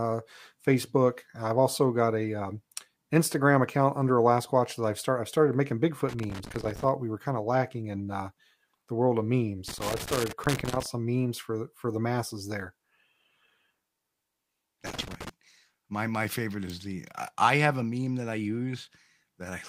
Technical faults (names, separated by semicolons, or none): loose connector crackle